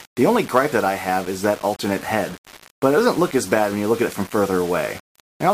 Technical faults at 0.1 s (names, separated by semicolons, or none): low bit depth without dither